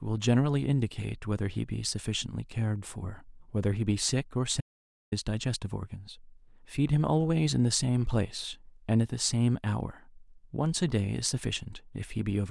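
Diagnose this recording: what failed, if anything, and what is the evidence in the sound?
Audio dropout to silence at 4.61 to 5.12 s: the speech stops abruptly, and for about half a second (roughly 512 ms) there is silence with no room tone or noise floor at all, then the speech resumes mid-flow. Because the gap is silent rather than low-level hiss, the signal was likely lost upstream at the input stage, through a disconnected cable, dropped device link or momentary mute, while the recorder kept writing blank samples. Anything spoken during that half second is unrecoverable.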